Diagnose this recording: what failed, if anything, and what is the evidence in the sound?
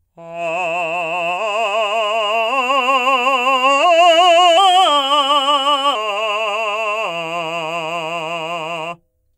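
At playback, a wrong sample rate from 4.57 to 5.95 s runs the music 1.09 times fast and about 1.5 semitones sharp, which fits 44.1 kHz material clocked at 48 kHz.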